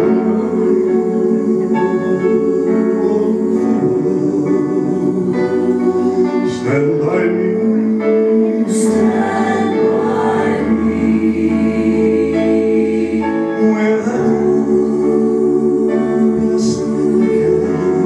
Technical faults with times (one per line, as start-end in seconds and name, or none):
none